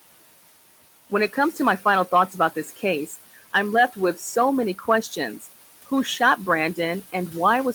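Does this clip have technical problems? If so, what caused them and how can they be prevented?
Yes. Noise suppressor artifacts run through the whole clip. The room noise sits about 17 dB below the speech, and the suppressor pulls it down by about 17 dB more. It works band by band, frame by frame. So the background dips in the gaps and swells back under the speech. A gentler suppression setting, or less noise at the source, would prevent this.

Speech cut by the noise suppressor occurs between 4.79 and 5.13 s. Here the suppressor mistook part of the speech for noise. It turned that part down along with the background, by about 8 dB at its deepest. Only a short stretch is hit, around 150 ms in total. Those sounds come across faint and swallowed rather than missing. Lowering the suppression strength, or letting it adapt more slowly to what it treats as noise, would prevent this.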